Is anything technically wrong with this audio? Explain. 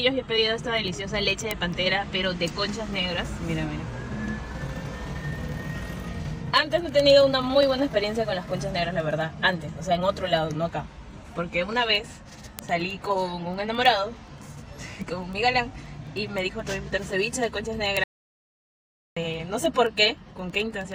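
Yes, two problems, and they overlap near the end.

Word clock ticks run from about 0.14 s right through to 20.92 s, coming roughly every tenth of a second, so around two hundred of them. The receiving device is on its own clock instead of locking to the sender's digital link, and every time the two clocks slip past each other a single sample gets dropped or doubled. That steady tick rate points to a clock mismatch of something like 200 ppm. You hear it as sharp little clicks at a regular pace, uneven in strength.

There's also an audio dropout to silence from 18.04 s to 19.17 s, roughly 1.13 s of nothing. The sound cuts out in mid-flow and comes back just as abruptly, and the gap is dead silence with no room tone underneath. That points to the input likely being lost for a moment, through a link failure, a disconnected device or a stray mute, while the recorder kept writing zeros. Whatever was playing in that stretch is simply gone.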